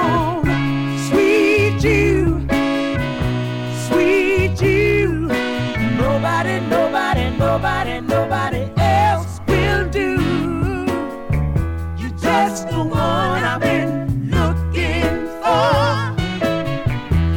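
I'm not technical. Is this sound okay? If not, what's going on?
No, there's hard clipping all the way through: the loudest peaks are too big for the system, so they get chopped flat and crackle harshly.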